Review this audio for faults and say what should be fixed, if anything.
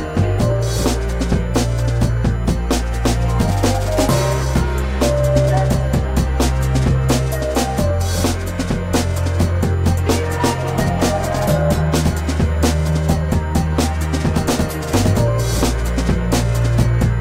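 A USB whine runs through the whole clip as a steady 1 kHz tone, strongest at that fundamental and sitting around 30 dB below the sound. The bus draws current in 1 ms frames, and that pulsing leaks into the audio through shared power or ground. To prevent it, power the interface separately or break the ground path with an isolator.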